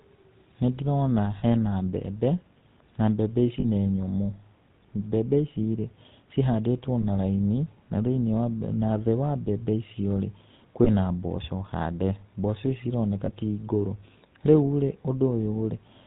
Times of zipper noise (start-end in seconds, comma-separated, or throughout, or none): none